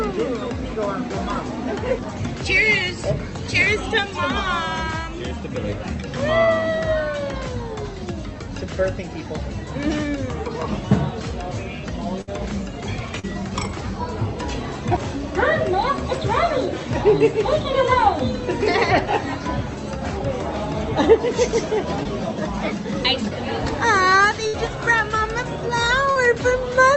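At 12.21 to 12.29 s the sound stretches into a held, fading tail and then jumps ahead. This burst of packet loss was bridged by extending the last audio for about 60 ms, with about 60 ms of the original skipped. Brief smears or wobbles follow at 13.19, 22.03 and 26.11 s. Each is a short concealed packet loss, where roughly 16 to 41 ms was synthesised from the preceding sound. At 24.47 to 24.55 s a second burst of packet loss again sustains and fades the sound before resuming about 60 ms later. Throughout, the call codec's band limit is audible as a top end stopping near 8 kHz.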